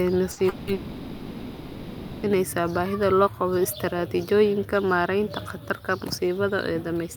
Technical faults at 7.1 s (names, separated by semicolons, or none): none